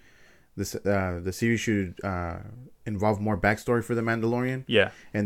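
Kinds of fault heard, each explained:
No faults can be heard in this recording.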